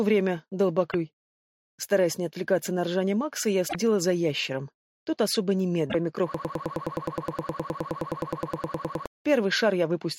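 At 0.88 to 0.94 s, 3.65 to 3.75 s and 5.87 to 5.95 s there is damaged data in the compressed stream: the decoder misreads corrupt frames and resyncs, giving short chirps or blips.

From 6.34 to 9.06 s a broken-record loop sets in: a 104 ms fragment repeats exactly, back to back, 26 times, likely because the stream stalled on its last buffer. Its rigid, even rhythm separates it from stutter or echo, and the audio that should have played there is lost.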